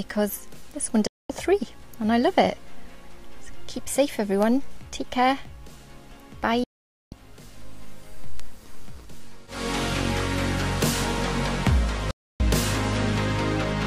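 At 1.07 s the sound cuts out in a digital broadcast dropout, muting for about 0.23 s until 1.30 s. The receiver has lost the signal or rejected corrupt frames, and mutes until valid data returns. A 3 ms fade makes the cut abrupt. Similar silent holes follow at 6.64 to 7.13 s (0.48 s) and 12.11 to 12.40 s (0.29 s). The gap lengths fit whole frames of 32 ms, and the missing audio is lost.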